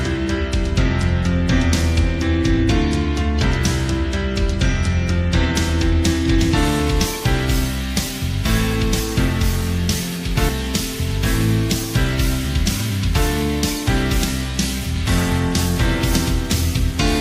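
From 14.29 to 15.60 s, a Bluetooth SBC bit pool drop dulls the treble and adds grit. It fits a bit pool halved to 14.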